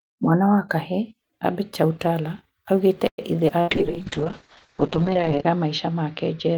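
A speech clip in which the sound catches and hangs at 3.07 s: the last sound is stretched into a brief fading buzz or hiss that dies into about 70 ms of silence, then the speech carries on at 3.21 s exactly where it left off, about 0.1 s late but with nothing lost. This call audio freeze was likely caused by packets held up in transit until the jitter buffer ran dry, so the receiver stretched what it had and inserted a pause rather than dropping any of the audio. Right after "aũgĩte ithe", at 3.48 to 3.52 s, the speech lurches forward with almost no seam: a skip ahead, where a stretch of roughly 70 ms was discarded while later packets were already queued, so the two sides of the cut are spliced nearly directly and the built-up lag shrinks by around 50 ms. Moments later, from 3.61 to 3.70 s, a short held, fading smear replaces the sound before the speech picks up again further on. That is a burst of packet loss: about 60 ms of audio never arrived in time to be played, and the receiver's concealment spun out the preceding sound and faded it across the hole, so that piece of speech is simply gone. 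From 3.68 s to the end the tone collapses, turning muffled, dull and grainy, with its worst stretch lasting about 1.8 s. This is a call bitrate drop: the call's bandwidth estimate fell and the Opus encoder went from 40 to 6 kbps, coding far more coarsely and cutting the audio band from 20 kHz down to 8 kHz, which removes the upper frequencies and leaves the watery, muffled quality through to the end.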